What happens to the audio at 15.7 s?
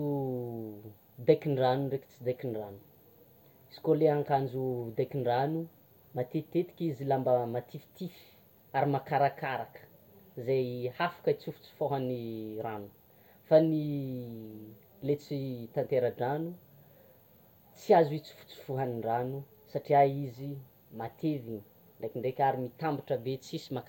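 Nothing goes wrong at 15.7 s; the speech carries on intact through that moment, with no dropout, click, distortion or glitch to be heard.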